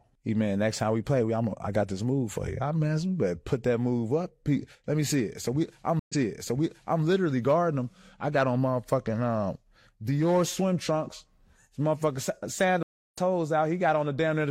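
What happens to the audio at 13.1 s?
A stream reconnect runs from 12.83 to 13.18 s. The connection dropped and the sound stops for 306 ms. A fresh decoder then picks up mid-stream. Playback resumes roughly 0.3 s further on, so that stretch of sound is skipped.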